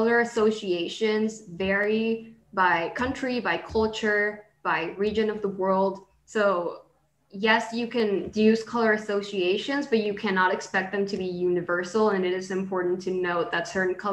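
Regular clicks recur every 2.06 s from 1.84 s to 12.12 s, heard as clock drift buffer slips. They are likely caused by two clocks differing by around 100 ppm, so a handful of samples is dropped or repeated each time. Each slip shows as a waveform discontinuity and a thin vertical spectrogram line.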